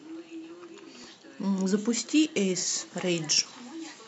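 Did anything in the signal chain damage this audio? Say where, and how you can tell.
Yes, there's a problem at the driver or buffer stage. At 1.04 s and 3.38 s the speech jumps ahead with no silent gap, losing roughly 10 ms each time. That's likely a dropped buffer (overrun), where samples were overwritten before the software collected them.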